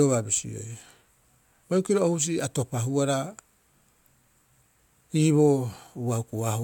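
No audible technical faults.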